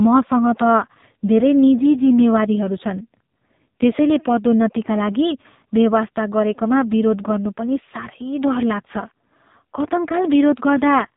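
Speech runs through AMR narrowband mobile codec coding from start to finish. Nothing above about 3.8 kHz survives, so the sound is thin and boxed in, with no air on sibilants. The codec rebuilds the voice from a vocal-tract model fed by a few pulses every 5 ms. At this clip's rate the damage is heavy. Vowels turn buzzy and synthetic. That points to one of the lowest AMR-NB modes, around 6 kbps.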